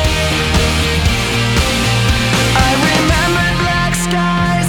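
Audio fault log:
No faults are heard in this clip. Nothing in the audio calls for an entry in this log.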